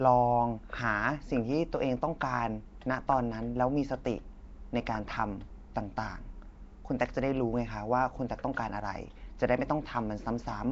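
Speech throughout carries a rough, hissy halo with a smeared, underwater quality, and nothing reaches above 7.7 kHz. This is plainly audible Nellymoser compression, likely from the Nellymoser Asao codec Flash used for microphone input, at a rate that fits a 32 kbps stream. The codec spends a fixed bit budget on each short block, so weaker bands get no bits and are filled with noise, which produces the hiss and blur.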